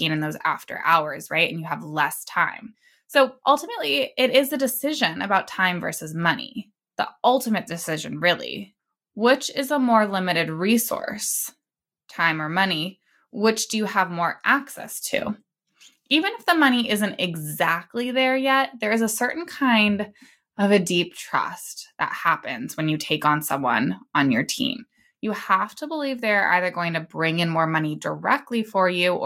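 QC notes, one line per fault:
No faults heard anywhere in this speech recording.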